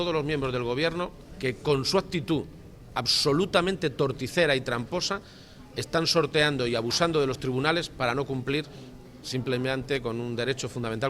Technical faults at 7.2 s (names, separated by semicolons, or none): none